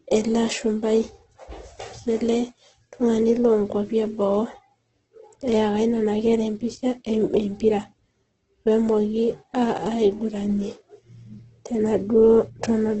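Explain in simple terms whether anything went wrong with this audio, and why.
Something went wrong, and it lasts from start to finish. The speech sounds rough and grainy, as if sprinkled with noise. Nothing above 8.2 kHz remains, so the crisp top end is gone. The likely cause is heavy Opus compression, which patches missing detail with noise.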